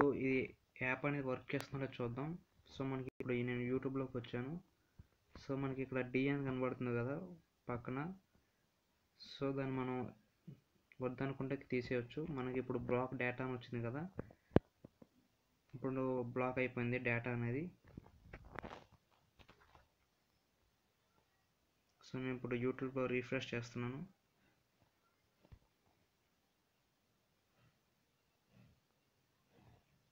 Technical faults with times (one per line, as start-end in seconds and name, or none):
1.60-1.63 loud pop
18.59-18.61 loud pop